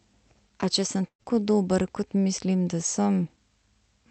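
At 1.01 s a lost packet was rebuilt from error correction. The speech runs through a call codec limited to about 8 kHz of bandwidth, which fits Opus at around 64 kbps. The missing 20 ms frame was replaced by the low-bitrate redundant copy that Opus carries in the following packet, so there is no gap. That frame comes out rougher and grainier than the speech around it.

From 1.07 to 1.21 s there is a burst of packet loss. About 120 ms of speech never arrived in time. The receiver extended the last sound it had and faded it down across roughly 118 ms of fill, and about 80 ms of that ends up silent. You hear a short held tone or hiss that dies away into a dropout. The speech then picks up further along, with the lost part gone.

Between 1.23 and 1.41 s there is a short concealed packet loss. A 20 ms piece went missing and the decoder synthesised about 16 ms from the preceding signal before blending back into real audio. 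This is heard as a brief smear or wobble rather than a hole. Timing is stretched by roughly 20 ms here.

At 1.87 s another lost packet was rebuilt from error correction. Again a 20 ms frame was restored from the redundant copy, with the same coarseness and added noise over that short stretch.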